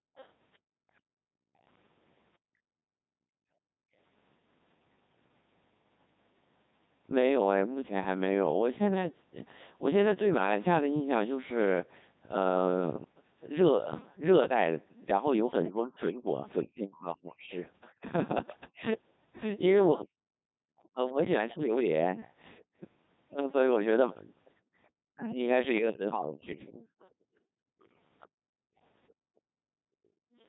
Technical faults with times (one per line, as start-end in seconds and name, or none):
0.00-30.48 Codec 2 vocoder